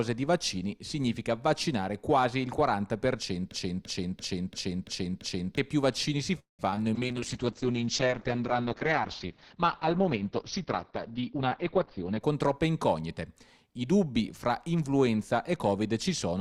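From 3.51 to 5.58 s the audio catches on a single fragment about 0.34 s long and plays it back to back, six times over, like a stuck record. The repeats are exact copies, and whatever should have played in those two seconds never arrives. This broken-record loop is most likely a stall in the player, encoder or stream that kept resending the last fragment it held.

Shortly after, from 6.39 to 6.61 s, the sound hangs: the last moment is drawn out into a fading buzz or hiss that sinks into silence for about 0.14 s before the audio resumes exactly where it left off. That is a call audio freeze. Packets were likely held up in transit and the jitter buffer ran dry, so the receiver padded about 0.2 s of its own and inserted a pause rather than losing material.

Right after it come two tiny blips, at 6.71 to 6.74 s and 6.76 to 6.79 s, each a brief smear where a few hundredths of a second are glossed over. 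These are short concealed packet losses. Each time, part of the audio missed the decoder, and the receiver briefly extended the preceding sound and crossfaded back into the real signal.

From 6.96 to 12.27 s the sound goes rough, watery and dull. The top end is cut off at about 6 kHz instead of reaching 20 kHz. This call bitrate drop points to a fall from roughly 48 kbps to about 8 kbps for over five seconds, after the bandwidth estimate collapsed and Opus was forced to code coarsely and trim the highs.

Overlapping the end of that stretch, from 11.29 to 12.61 s, the audio rushes along at about 114% of its normal pace with no change in pitch, so it sounds hurried. This jitter buffer speed-up happens when the receiver, holding more delay than it wants, snips out many pitch-period-sized slivers to catch up. Together they remove about a fifth of a second.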